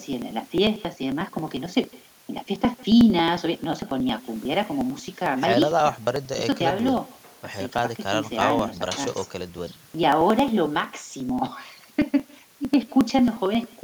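Speech with an echo with no canceller throughout: a faint copy, about 26 dB down, trails the talker by roughly 150 ms, thin. Periodic USB or driver dropouts run from 0.13 s to 13.73 s, skipping around 10 ms every 0.09 s, heard as a regular ticking train.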